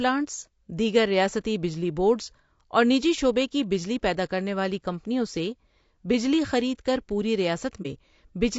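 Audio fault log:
throughout: Low-delay AAC compression. The speech sounds rough and grainy, with noise between harmonics and a dulled top band. The likely cause is AAC-ELD's short frames at a low bitrate, around 32 kbps.
7.82 to 7.86 s: AAC frame loss with muting, right after "بجلی خرید کر پوری". About 30 ms of sound fades out and back in. This brief dip fits a single zeroed frame.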